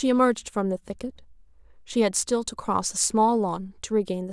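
Nothing goes wrong anywhere in this speech recording; you can just listen without anything jumping out.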